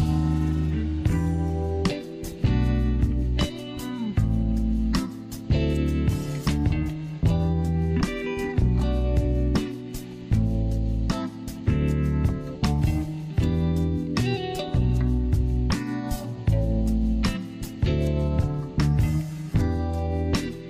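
Nothing here trips the ear at all; the whole recording runs along without a single dropout, glitch or other technical fault to point to.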